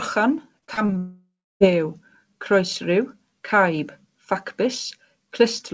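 A speech recording sent over a call path shows two network faults close together early on. From 0.59 to 0.92 s, repeated packet loss (robotic sound) sets in. Audio arrives with several short holes, the longest about 32 ms, and the receiver patches each one by stretching the preceding sound. The stitched-in material adds up to about 116 ms, over a third of that stretch, so the speech turns choppy as fragments go missing. At 0.98 s the signal cuts out for about 0.63 s, which points to a long network dropout as the likely cause. Nothing new comes through until 1.63 s. The last sound is first drawn out into a decaying buzz, then fades into roughly 0.29 s of silence, and speech resumes with that portion lost for good. Throughout, the G.722 call codec's band limit is present, with nothing above 8 kHz.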